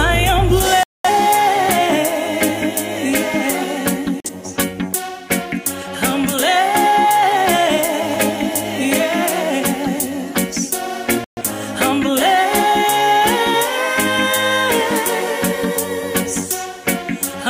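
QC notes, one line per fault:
0.83 to 11.42 s, digital broadcast dropout: three clean mutes, at 0.83 to 1.10 s, 4.20 to 4.30 s and 11.24 to 11.42 s. The receiver hit frames it couldn't decode and went silent until good ones arrived, so the sound snaps off and picks up later with the missing stretch simply gone. The losses run about 213, 43 and 128 ms, which fits five, one and three dropped frames of roughly 43 ms each.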